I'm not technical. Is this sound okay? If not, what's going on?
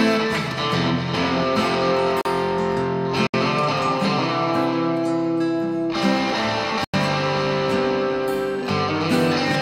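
No. There are two kinds of fault.

The first is a block of digital silence, which happens three times: at 2.21 s for about 40 ms, at 3.27 s for about 70 ms, and at 6.84 s for about 93 ms. Each time, the sound drops instantly to complete nothing and then snaps back. This most often happens when the playback program fails to deliver the next chunk of audio in time and a stretch of zeros is played instead. The longest gap fits a 4096-sample buffer.

The second is damaged data in a compressed stream, a brief glitch at 8.61 s. Part of the compressed file at that point is corrupted, so the decoder misreads it and has to find its place again. That comes out as a short chirp or blip rather than clean sound.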